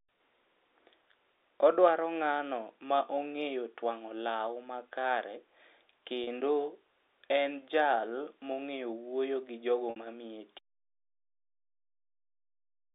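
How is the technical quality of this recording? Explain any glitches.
Two kinds of fault are audible in this telephone-band speech recording, which is carried over G.711 A-law at 64 kbps with a line band of roughly 300 Hz to 3.7 kHz.

Packet loss with pitch repetition occurs at 6.24 s for 30 ms and at 9.90 s for 60 ms, just after "mong'eyo wuoyo gi jogo". The receiver filled each gap by repeating the last pitch period and fading it out. The 30 ms gap fits a single lost packet and sounds like a brief, slightly held buzz. The 60 ms gap points to two consecutive lost packets. The repetition is audible for longer and fades before speech cross-fades back in.

Audio dropout to silence begins at 10.59 s, right after "wuoyo gi jogo mamiye", and lasts to the end of the recording. The signal stops mid-flow and is replaced by digital silence with no room tone. The likely cause is that the input was lost through a disconnected device, a failed link or an unintended mute while the recorder kept writing silence. 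Nothing from that final stretch is recoverable.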